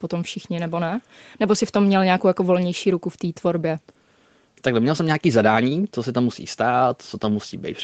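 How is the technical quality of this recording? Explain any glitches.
No glitches or faults are present.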